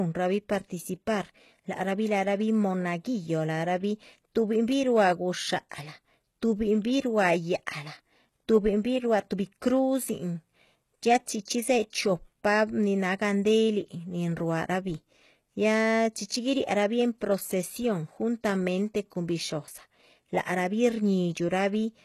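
Throughout the speech, the treble sounds plainly synthetic, likely from HE-AAC compression at a very low bitrate, around 16 kbps. High bands are rebuilt from copied lower ones, so sibilants turn gritty and lispy. A spectrogram shows blocky, repeated upper texture and nothing above 12.3 kHz.

From 16.28 to 16.30 s, just before "guiriarabih en procesión", pre-echo spreads coding noise about 21 ms ahead of a sharp onset, giving a brief hiss and a softened attack. The waveform shows a noise smear rising before the transient.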